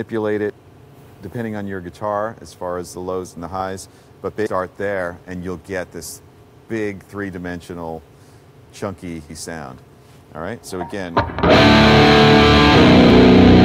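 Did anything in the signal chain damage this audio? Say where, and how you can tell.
Yes. Damaged data in a compressed stream hit the codec stage: corrupted bytes made the decoder misread frames and hunt for the next valid header. That is heard as short blips at 0.50 s, 9.30 s and 13.10 s, and a longer disruption from 4.43 to 4.47 s.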